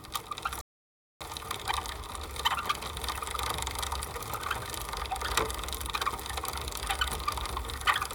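At 0.61 s the sound cuts out for about 0.59 s until 1.21 s, a playback stall, likely the player running short of data. The waveform shows a flat gap and the spectrogram a blank column. From 1.21 to 2.39 s comes time-compressed catch-up: the sound runs 1.5 times fast at unchanged pitch, with events packed closer together on the spectrogram.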